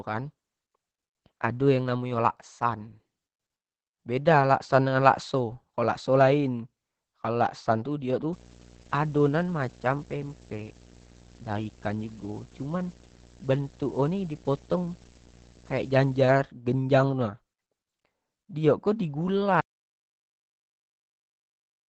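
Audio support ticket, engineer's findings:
Whole clip, Opus compression: muffled, hoarse speech, heavy codec damage, nothing above 8.6 kHz. Likely Opus speech (SILK) mode at about 12 kbps, wideband.

8.33–16.33 s, video or display buzz: 59.94 Hz field-rate buzz with hash above, about 20 dB below the speech. A screen or video cable is coupling into the audio.

19.61 s to end, audio dropout to silence: speech cuts out into silence with no room tone. Likely a lost input, with the recorder writing silence.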